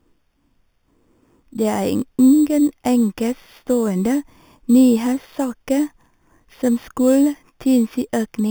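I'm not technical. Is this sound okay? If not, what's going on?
No. A metallic fizz rides on the speech throughout. This is imaging from sample-and-hold upsampling: crude rate-raising, likely from 8 kHz, mirrors the voice into a false 4 to 8 kHz band.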